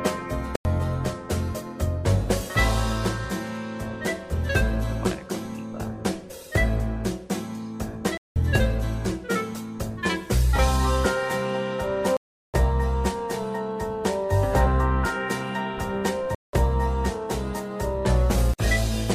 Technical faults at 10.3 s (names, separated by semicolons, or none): none